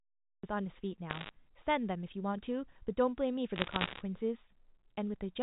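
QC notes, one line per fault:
0.00–0.43 s, cut-off start: the clip opens on digital silence, then at 0.43 s the speech appears already in progress with no natural attack or fade-in. The recording or stream began late, catching the sound mid-utterance, so the onset is abrupt and clipped.
1.1–1.3 s and 3.56–4.02 s, bit errors on a digital phone line: short bursts of sharp ticks and crackle over the speech, which itself stays intact. Flipped bits on the G.711 A-law line, around one in a hundred, each corrupt a single sample, and hits on high-order bits produce the loudest ticks.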